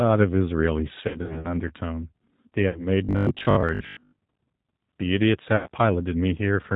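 Speech coded with G.729 at 8 kbit/s runs the whole clip: nothing above 4 kHz survives, and the voice has a plainly rough, synthetic edge. This is the codec's model of the voice being rebuilt from a few pulses per frame, not simple low-pass filtering, which would sound muffled but smooth. VoIP packet loss concealed by the speech codec appears three times. From 1.08 to 1.48 s about 160 ms is missing in patches over roughly 360 ms, the longest gap 60 ms. The other two events are at 2.69–2.87 s, with 60 ms lost, and at 5.56–5.69 s, with 100 ms lost. In each, the voice smears into a buzzy tone or coloured noise that fades, and stays weak briefly after the audio resumes, unlike the hard silences or clicks of uncovered dropouts. From 3.05 to 4.17 s the sound turns into a rigid, metallic 50 Hz buzz that still loosely tracks the speech. This is robotic sound from repeated short buffers. The software is likely looping the last 20 ms while about half of the real audio is skipped. 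Its fixed, steady pitch separates it from the fading extrapolation of concealment.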